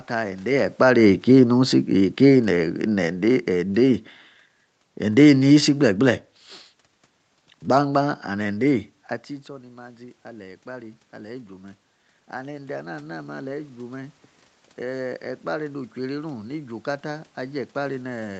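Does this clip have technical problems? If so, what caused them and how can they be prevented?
Yes. From 0.45 to 4.03 s the automatic gain falling is audible: the talker comes closer to the microphone at around half a second, the level jumps, and the gain control responds by pulling its gain down by about 7 dB over roughly three and a half seconds. A talker simply moving away would leave the room noise unchanged. Here the background sinks together with the voice, which shows the gain stage itself is turning down. To prevent it, keep a steady distance from the microphone, or use a gain control with a slower attack and a wider target window.

From 9.46 to 11.59 s there is automatic gain rising. Around 9 s the talker moves back and the input drops by about 17 dB. Over the next two seconds the gain control raises its gain by about 4 dB, so the voice partly recovers and the room noise swells with it. 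That shared rise in the background is what separates this from the talker returning to the microphone, which would lift only the voice. To prevent it, keep the talker's position steady, or set the gain control to react more slowly to short drops in level.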